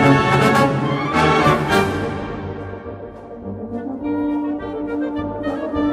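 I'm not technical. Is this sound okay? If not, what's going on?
Yes, nothing stood out as a problem when listening to this sound.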